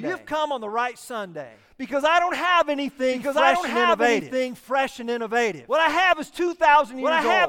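Throughout the speech, a doubled audio track is heard: a second full-band copy, at about the same level, trails the original by roughly one and a half seconds, likely from a slower capture path or misaligned edit. Spectrograms show the pattern repeated, shifted right.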